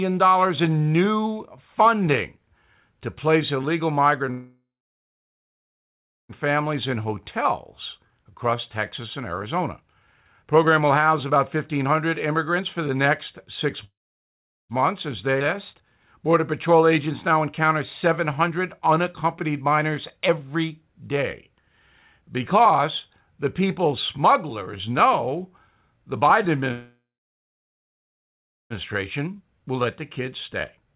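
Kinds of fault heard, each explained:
Call audio freeze: The sound stops three times, at 4.31 to 6.32 s right after "to place illegal", at 13.84 to 14.73 s, and at 26.72 to 28.73 s. Each gap opens with a brief decaying buzz and then falls silent for most of its length, about 1.6 s, 0.8 s and 1.7 s. Playback then resumes where it left off with nothing skipped. The likely cause is packets held up in transit, leaving the jitter buffer empty.
Jitter buffer speed-up: After each freeze the delayed audio arrives together, and the receiver trims short pitch-period slices repeatedly to work the excess delay back down. Pitch is unchanged, but the sound plays fast and hurried: about 7% fast at 6.48 to 7.13 s, 14% over 7.98 to 13.66 s, 10% over 14.82 to 21.50 s, and 13% from 29.19 s to the end. The longer stretches each drop roughly 0.7 s of material.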